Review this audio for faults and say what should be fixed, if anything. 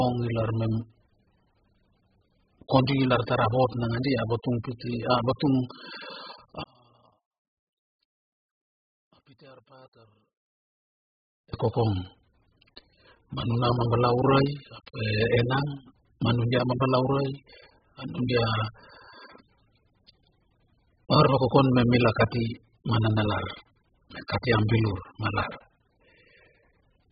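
Heavy AAC compression runs through the whole clip. The speech sounds dull and smeared, with a warbling, fizzy edge on sibilants. Nothing survives above 5 kHz, which shows as a hard flat ceiling on a spectrogram. This is likely AAC-LC at a very low bitrate, around 8 kbps.

From 6.63 to 11.54 s, just before "e kokong", the level drops by about 29 dB and the speech turns faint. This shows as a collapsed stretch in the waveform. The likely cause is one channel inverted, so the shared centre signal cancels when the two channels are summed to mono.

To prevent this, encode at a much higher bitrate and check channel polarity before any mono fold-down.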